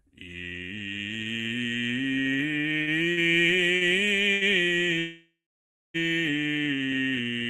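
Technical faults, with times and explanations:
2.61 to 3.19 s, repeated stalls (stutter): packets kept arriving late, so the jitter buffer ran dry four times. The receiver extended the last sound through each gap, the longest 59 ms, filling 170 ms (about 30% of the span). Nothing is lost, but the music drags and stutters.
3.75 s and 4.33 s, short stall from a late packet: each time a packet missed its slot and the buffer emptied, so the receiver held the last sound for 61 ms and then 80 ms before resuming from the same point. This gives a briefly stretched sound with a faint buzz or dip.
4.99 to 5.96 s, call audio freeze: the music stops moving, turns into a fading buzz or hiss, then goes silent for roughly 0.6 s before resuming exactly where it left off, 951 ms later. Packets were likely held up in transit, emptying the jitter buffer and leaving a gap without losing any audio.
6.47 to 6.88 s, jitter buffer slow-down: the buffer was rebuilding its reserve by repeating single pitch periods, adding 57 ms. 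Playback runs at 88% speed at unchanged pitch, so the music sounds drawn out.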